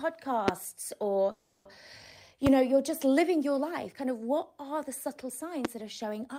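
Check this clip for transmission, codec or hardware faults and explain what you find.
Two fault types appear: three loud pops and one call audio freeze.

Loud pops at 0.48–0.51 s (roughly 20 dB above the speech), 2.47–2.49 s just before "know you're just living", and 5.65–5.67 s just after "what are the subtle" (each about 15 dB). Each is a single sharp click over continuing speech, likely from a voltage pulse such as static or a switching glitch.

Call audio freeze at 1.31–1.68 s. The last sound is stretched into a fading buzz for about 340 ms, likely because delayed packets emptied the jitter buffer. Speech then resumes where it stopped, with nothing lost but everything after it shifted 340 ms later.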